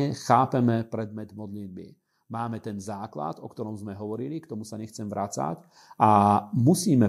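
Listening to this speech recording, nothing technical stood out as wrong at any point.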